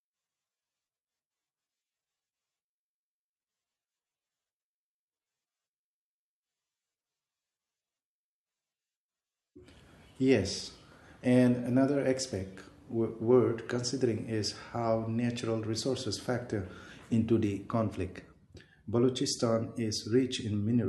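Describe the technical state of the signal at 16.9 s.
At 16.9 s the signal is intact, with no fault audible at that point in the speech.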